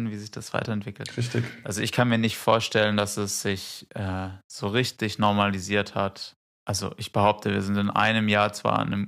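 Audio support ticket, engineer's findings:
Listened to the speech recording and found nothing to flag, so there's no fault to report on this ticket.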